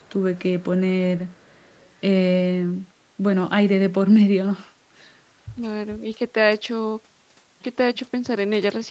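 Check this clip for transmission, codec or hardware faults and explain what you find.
Two faults are present in this speech clip: an echo leak in the first two seconds and brief speech suppression during double talk around 5.6 and 6.0 s. The 8 kHz bandwidth limit from the Opus call path is expected for this codec.

Echo leak occurs from 0.0 to 0.13 s, 0.59 to 0.9 s and 1.17 to 2.01 s. A faint copy of the speech trails the original by about 0.44 s, roughly 25 to 35 dB down. This is likely residual loudspeaker pickup that the far end's echo canceller failed to remove.

Speech suppressed in double talk shows up at 5.55 to 5.61 s and 5.99 to 6.05 s. The talker's level dips by a few dB in short bursts. The likely cause is an echo canceller that mistook overlapping talk for echo and attenuated both signals together.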